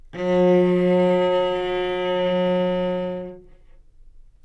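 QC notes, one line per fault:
Nothing stood out on listening to the audio.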